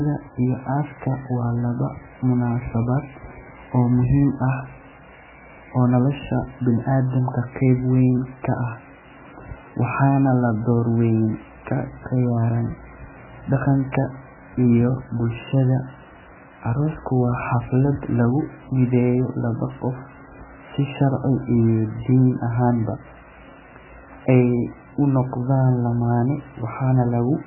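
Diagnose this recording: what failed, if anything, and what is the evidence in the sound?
The codec stage failed, most likely through heavy MP3 compression. Throughout the speech, nothing is heard above 2.9 kHz, and the damage is severe enough to point to a bitrate of around 8 kbps. Starved of bits, the encoder drops the treble at a fixed cut-off and discards weak spectral lines, leaving heavy codec damage. A band-limited telephone path or a plain analogue low-pass would also dull the sound, but it would not add this codec-style damage.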